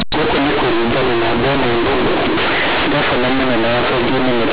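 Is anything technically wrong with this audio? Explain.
Yes. Throughout the speech, companded audio read as linear: A-law bytes play as raw 8-bit samples, so the waveform jumps in half-range swings. It sounds loud and buzzy, with noise filling pauses and broadband smearing on a spectrogram. The underlying 8 kHz telephone coding still caps content near 4 kHz.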